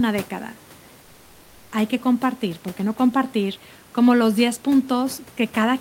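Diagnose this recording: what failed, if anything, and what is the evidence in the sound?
Comfort noise replaces the background from 1.01 to 1.71 s. The room noise, about 27 dB below speech, becomes a steady, featureless hiss about 2 dB quieter. This is the codec stage, likely Opus discontinuous transmission, with the receiver synthesising filler noise for 0.7 s.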